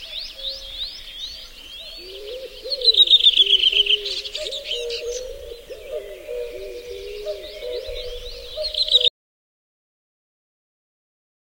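A recording of sounds with an audio dropout to silence from 9.08 s to the end: the sound cuts off mid-flow into silence with no room tone, a flat line on the waveform and an empty spectrogram, likely from lost input while recording continued.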